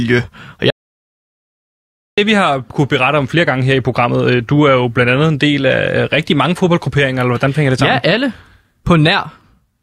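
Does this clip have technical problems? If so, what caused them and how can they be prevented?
Yes: there's an audio dropout to silence from 0.70 to 2.18 s, about 1.47 s of dead silence, likely a lost input link. Check cables and wireless connections before recording.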